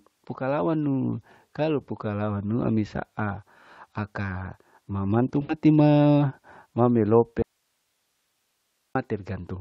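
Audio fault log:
5.41–5.52 s, VoIP packet loss concealed by the speech codec: after "saa aka mama mantu", about 80 ms of audio is missing, which fits four lost frames. The decoder repeats its last pitch and filter at falling gain, so the speech smears into a fading buzzy tone before "ma ma". On a spectrogram, flat, repeated harmonics fade out. On the waveform, a periodic, decaying stretch appears.
7.42–8.95 s, audio dropout to a faint residue: after "ma ma", the signal cuts off abruptly for about 1.53 s, leaving only hiss roughly 50 dB below the speech. The likely cause is a lost feed on a path that stayed live. The waveform shows a sudden drop to a thin noise floor. The spectrogram shows a uniform, faint broadband haze with hard edges.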